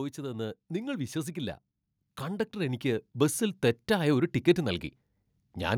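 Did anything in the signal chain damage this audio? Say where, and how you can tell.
Yes. Automatic gain rising in the call-processing stage twice lifts the whole signal by about 6 dB: first from 0.15 to 1.64 s, then more slowly from 2.2 to 4.85 s. The AGC judged the input too quiet and raised its gain step by step. The background noise floor swells along with the speech, which a talker leaning in or speaking louder would not cause. The rise is gradual ramping rather than an instant level jump.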